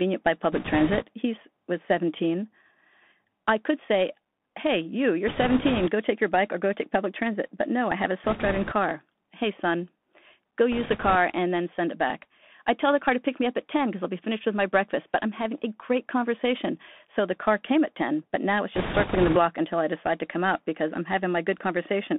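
Throughout, the speech carries the sound of the Bluetooth CVSD headset codec, and the damage is plainly audible. The codec sends one bit per sample at 64 kHz, each bit only saying whether the waveform steps up or down, with the step size adapting to the signal. The line passes roughly 200 Hz to 3.5 kHz. Loud high-frequency content outruns the step size and distorts, s sounds turn scratchy, and a granular hiss sits under the speech.

Bit errors on a Bluetooth voice link then appear in five bursts. The first runs from 0.52 to 1.04 s. The second runs from 5.28 to 5.89 s, between "say hey you you're" and "take your bike or". The third runs from 8.24 to 8.73 s, right after "no I have a". The fourth runs from 10.72 to 11.16 s, just before "and then send it". The last runs from 18.75 to 19.37 s.

Flipped bits in the CVSD stream all carry equal weight and their effect dies away quickly, so each burst sounds like a rushing crackle riding on the speech rather than isolated clicks. 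The crackle scales with speech level. Error rates are around 5 percent for the first three bursts, about 3 percent at 10.72 s, and about 10 percent at 18.75 s, where the noise is densest.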